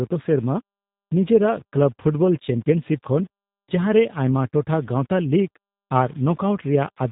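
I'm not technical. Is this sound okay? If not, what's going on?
No. Throughout, the speech sounds gritty and grainy, especially in quieter moments, likely from low bit depth without dither, where too few levels coarsely round off the sound. It also sounds muffled, slightly robotic and thin, from the G.729 codec, a phone-call format that rebuilds speech roughly and removes everything above 3.8 kHz.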